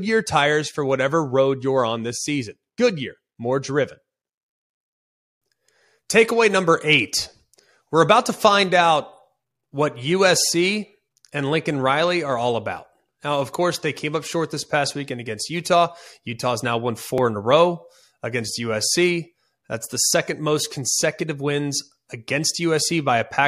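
Speech, with a dropped buffer (overrun) at 17.18 s: the audio jumps forward with no gap, as if a few milliseconds were cut out and the two sides butted together. The likely cause is the capture buffer being overwritten before it was read.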